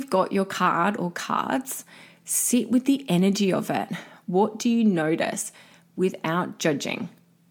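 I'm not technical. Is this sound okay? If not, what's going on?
Yes, nothing in this speech recording points to a technical problem with how the sound was captured or carried.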